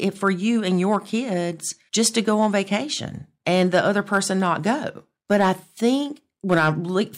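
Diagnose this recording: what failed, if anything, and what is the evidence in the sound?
Hard clipping: the speech ran hotter than a converter or fixed-point stage could pass, so peaks were cut flat. There are brief crackles at 0.25 and 0.92 s, then crackle on peaks at 2.01–2.75, 3.48–4.53, 5.32–5.85 and 6.51–6.69 s. The overload grows from about 1 dB to about 4 dB.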